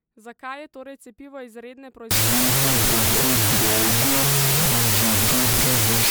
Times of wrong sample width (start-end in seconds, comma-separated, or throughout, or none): 2.11-6.11